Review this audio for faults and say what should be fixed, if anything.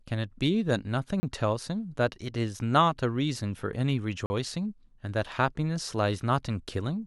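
Two blocks of digital silence cut the speech at 1.20–1.23 s (30 ms) and 4.26–4.30 s (40 ms). Each block is an abrupt drop to silence and back with no fade. This points to the output buffer not being filled in time. To prevent these dropouts, give the audio thread enough buffer headroom and check the processing for invalid values.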